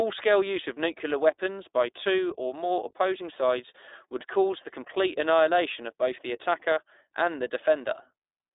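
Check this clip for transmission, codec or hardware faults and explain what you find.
The speech shows one codec fault, present from start to finish: the iLBC codec. This narrowband coder encodes each short frame independently, in a way that fits 20 ms frames at around 15 kbps. It passes nothing above about 3.8 kHz, so the speech is muffled, band-limited and a little rough and synthetic in texture, with plainly audible codec damage.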